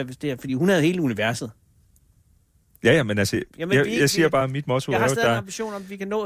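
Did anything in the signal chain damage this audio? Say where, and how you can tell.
No, nothing in the signal chain damaged this audio.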